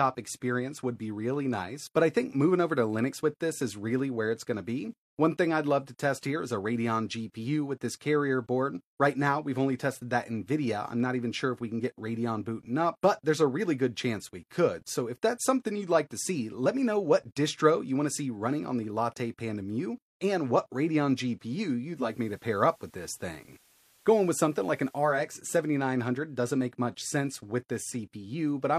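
From 21.83 s to 25.34 s there's a digital radio blending to analogue: the receiver loses the digital stream and cross-fades over about 0.4 s to the FM broadcast, then back. Hiss comes up, roughly 35 dB under the signal, and the level shifts by about 1 dB.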